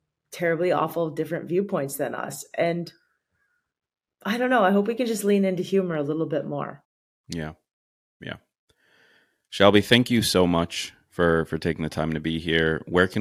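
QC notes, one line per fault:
No audible faults found in this speech recording.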